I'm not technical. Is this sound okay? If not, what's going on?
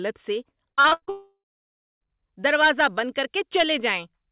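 No. From 0.7 to 1.09 s there is repeated packet loss (robotic sound): six short gaps, the longest 80 ms, each patched by stretching the previous sound, so about half of that stretch is filler and the speech turns choppy.

Right after, from 1.09 to 2.02 s, comes a long network dropout, likely from the connection stalling. The last sound is carried on briefly as a fading buzz or hiss, then about 0.6 s of silence, and speech resumes at "دروازہ بند کر" with that part missing. The phone-style line caps everything at 4 kHz.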